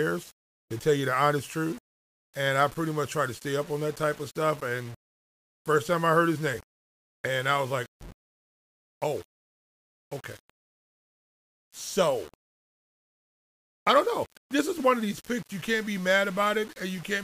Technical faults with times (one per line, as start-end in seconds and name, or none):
0.00-17.23 low bit depth without dither